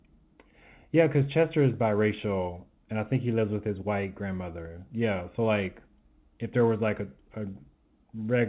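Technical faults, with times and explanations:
No faults found; the speech carries nothing above 4 kHz, which fits a narrowband G.711 mu-law call path at 64 kbps.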